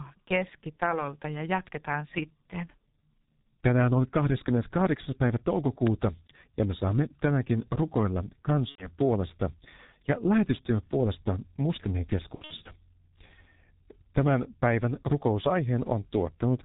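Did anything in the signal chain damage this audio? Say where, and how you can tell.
Yes. Three kinds of damage are audible, at three stages.

The codec stage shows it first. A G.723.1 codec colours the whole clip. The speech is muffled and hoarse. Nothing is heard above about 4 kHz. Consonants smear together. The damage is heavy, which fits a low-rate G.723.1 stream near 6 kbit/s. The coder models the voice in 30 ms frames and updates that model slowly. Fast detail between updates is lost.

A loud pop sits at 5.87 to 5.89 s. It is a single sharp click, roughly 15 dB above the speech, which carries on underneath. It is over within about 20 ms. The cause is likely a voltage step in the analogue wiring or a driver glitch. The following circuits shaped that step into the short pulse heard here.

VoIP packet loss concealed by the speech codec appears twice. This is the network stage. From 8.69 to 8.88 s, about 90 ms of audio is replaced. 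That fits three lost 30 ms frames. The speech is stretched out and fades, then stays weak or distorted briefly afterward. From 12.36 to 12.68 s, about 180 ms goes missing. The gaps are scattered over 300 ms, and the longest is 60 ms. The decoder repeats its last pitch and filter while lowering the gain.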